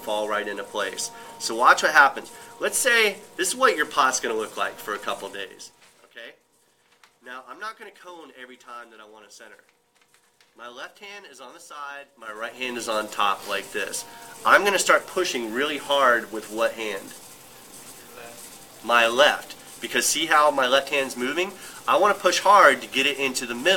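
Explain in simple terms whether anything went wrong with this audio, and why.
There's zipper noise twice: a quick ticking from about 5.21 to 6.14 s as the level drops, and again from 12.12 to 12.80 s as it comes back up. The volume moves in small jumps rather than a smooth glide, roughly ten and then fifteen a second.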